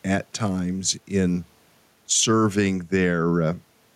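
Gain pumping runs through the whole speech clip. The level swings by around 5 dB. Loud and quiet passages sit closer together than they should, giving a squashed, breathing quality. The likely cause is microphone gain set far too high, with a fast limiter or compressor clamping down on each peak. The room noise itself sits about 44 dB below the speech.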